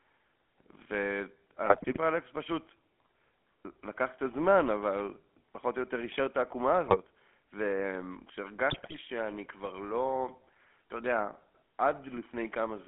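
The whole recording carries the GSM full-rate codec. The speech is confined to a telephone band of roughly 200 Hz to 3.4 kHz, with a gravelly, buzzy roughness from the pulse-driven vocal-tract model. That grain separates it from plain band-limiting, which dulls the sound without adding buzz.

GSM bit errors break in from 1.66 to 1.98 s, from 6.84 to 6.97 s and from 8.70 to 8.97 s, the last being the most severe. Corrupted filter, pitch and gain values make the speech squawk, pop and gargle. Unlike dropouts or packet-loss concealment, the sound is mangled and sometimes louder rather than muted or smoothly repeated.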